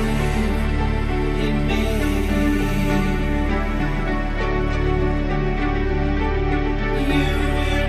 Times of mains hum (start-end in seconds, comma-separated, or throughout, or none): 0.94-4.34